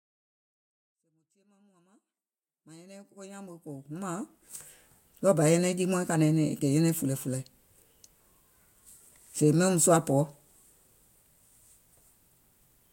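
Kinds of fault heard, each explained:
Nothing in this speech recording stood out as a fault on listening.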